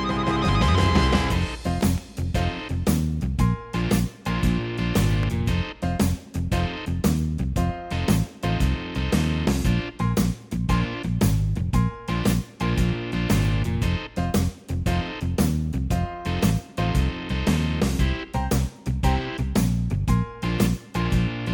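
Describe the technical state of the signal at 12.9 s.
Nothing audible disturbs the signal at 12.9 s, and the audio is intact at that moment.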